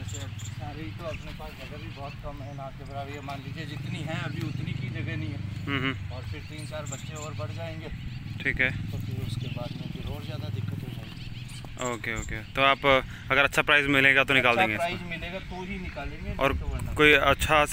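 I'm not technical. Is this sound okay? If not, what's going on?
No. There are sharp clicks at 4.89, 8.08, 15.94 and 17.13 seconds. These are likely dropped samples, tiny gaps that make the sound jump abruptly.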